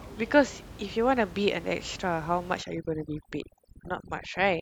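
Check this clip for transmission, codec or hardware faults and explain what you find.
One fault is present, running from 2.62 s to the end of the clip: overdone noise removal. Before that point the room noise sits about 17 dB below the speech in the background. From 2.62 s a noise reducer set far too aggressively starts cutting every frequency band that comes close to its noise estimate. The background drops and breaks up into twinkling, chirpy specks, and the quieter parts of the speech are removed along with it. On a spectrogram, the even noise floor breaks up into dark gaps with isolated bright dots, and the speech harmonics look ragged at their edges. The waveform's pauses drop in level.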